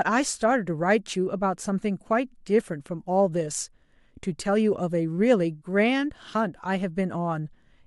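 No technical faults are audible anywhere in this recording.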